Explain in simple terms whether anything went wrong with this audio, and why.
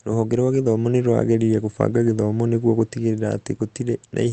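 Nothing went wrong here; no faults are audible.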